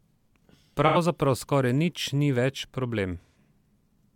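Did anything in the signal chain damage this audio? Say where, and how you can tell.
Yes. AAC frame loss with concealment at 0.86–0.97 s and 3.21–3.35 s: the codec decoder refilled 85 and 128 ms gaps from earlier spectra, leaving smeared, phasey speech.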